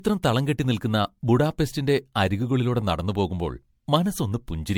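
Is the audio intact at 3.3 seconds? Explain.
No. At 3.3 seconds the speech sounds swirly, smeared and hollow, with blurred onsets, as it does through the whole clip. This is likely generation loss: the audio seems to have passed through an MP3 codec around seven times, at what sounds like 96 kbit/s. Each re-encode quantises on a shifted frame grid, so noise and spectral holes pile up beyond what one pass would leave. Nothing remains above 19.9 kHz.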